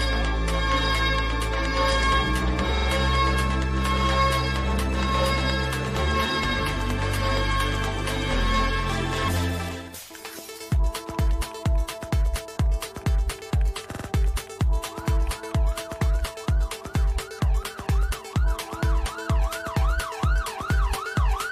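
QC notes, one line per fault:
2.77–2.86 s and 13.91–14.05 s, repeated frames: the same short block of about 46 ms, which fits two compressed frames, plays again twice at the first point and three times at the second, adding 93 ms and 139 ms. Each repeat gives a rhythmic stutter. Unlike a dropout, nothing is lost; the sound loops instead.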